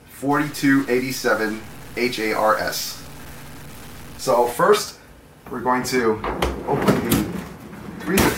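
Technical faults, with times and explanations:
0.31–4.53 s, stuck bit: noise that tracks the waveform rather than steady hiss, likely from one converter bit stuck, with a step of about -35 dBFS.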